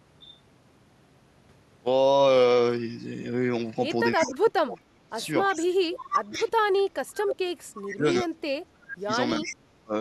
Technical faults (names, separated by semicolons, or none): speech suppressed in double talk; echo leak